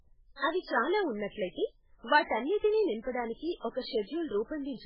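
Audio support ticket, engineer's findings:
Encoder starved of bits, likely heavy MP3 compression, level that fits roughly 8 kbps. Treble cut hard, nothing above 5.2 kHz. Weak spectral lines toggling frame to frame across the whole clip: watery, swirly speech, metallic chirps on s sounds, smeared attacks.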